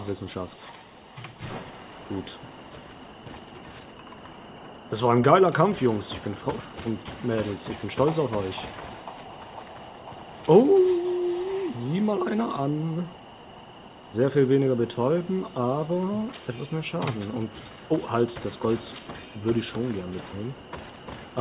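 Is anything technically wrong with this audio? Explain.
No, nothing is technically wrong with this audio.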